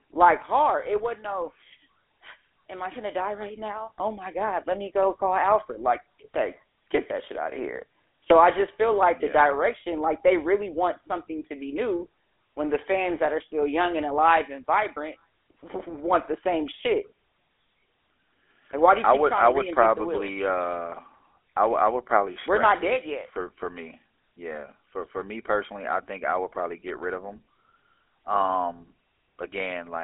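Throughout the speech runs the gravelly, buzzy roughness of the GSM full-rate codec, consistent with its 13 kbps mode. A crude vocal-tract model driven by coarse regular pulses replaces fine detail. A spectrogram shows energy held within 300 Hz to 3.5 kHz, blank above 3.8 kHz.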